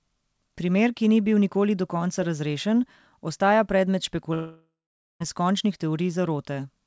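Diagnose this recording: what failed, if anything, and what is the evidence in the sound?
Long network dropout, 4.34 to 5.22 s, at the network stage. The speech decays into a fading concealment buzz, then about 0.47 s of near silence, and resumes with 0.6 s missing. Packets were likely lost in transit, and playout shifts by roughly 0.3 s.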